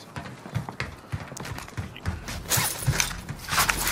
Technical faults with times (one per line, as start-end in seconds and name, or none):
1.37 electrical switching spike